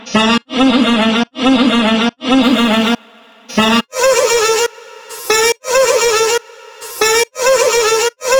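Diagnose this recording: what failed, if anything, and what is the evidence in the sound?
Crude rate conversion from 2.43 s to 8.35 s: a gritty, inharmonic fizz tracks loud, bright sound, which fits nearest-sample 44.1-to-48 kHz resampling without filtering, leaving shifted, inharmonic copies of the sound about 20 dB below it.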